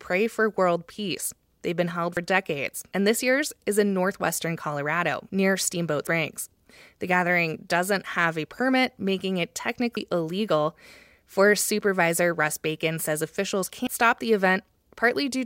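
There's audio missing between chunks at 2.17, 6.07, 9.97 and 13.87 s. Each time roughly a tenth of a second drops out and the edges butt together, so the speech skips after "been held", "a permit making it" and "says officials". The even spacing likely points to 4-second chunks losing a sliver at each handover.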